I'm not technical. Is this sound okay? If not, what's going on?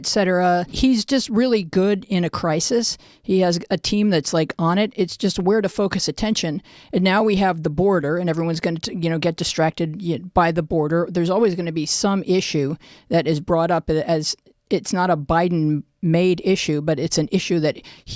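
Yes, this one sounds fine, and there's nothing going wrong with it that you'd need to worry about.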